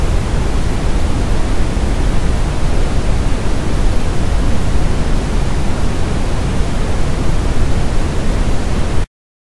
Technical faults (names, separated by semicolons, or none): none